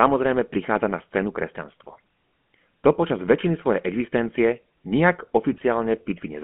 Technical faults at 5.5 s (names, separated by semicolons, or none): GSM full-rate codec; GSM bit errors